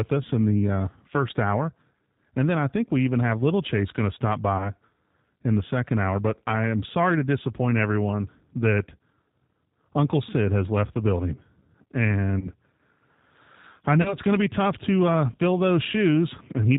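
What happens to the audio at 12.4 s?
From 12.39 to 12.51 s the sound smears into a brief, fading buzzy tone or coloured noise before recovering. This is VoIP packet loss concealed by the speech codec: 30 ms went missing, which fits a single lost packet, and the decoder extended its last pitch and filter. Throughout, the audio is band-limited below 4 kHz and slightly rough and synthetic from the G.729 codec running at 8 kbit/s.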